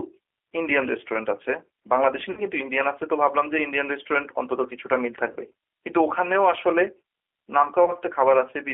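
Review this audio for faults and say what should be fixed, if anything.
G.729 codec throughout: speech sits in a roughly 300 Hz to 3.4 kHz band with rough, synthetic texture, which fits 8 kbit/s pulse-based coding rather than simple band-limiting. Prevent it by using a wideband codec such as G.722 or Opus.

VoIP packet loss concealed by the speech codec at 2.31–2.41 s, 5.33–5.37 s and 7.85–7.92 s: the decoder stretches the last sound into a fading buzzy tone or coloured noise, weak beyond each gap. The first fits about 60 ms lost, the others 30 ms. Unlike dropouts, there's no silence or click. Prevent it with a larger jitter buffer, forward error correction or a less congested network path.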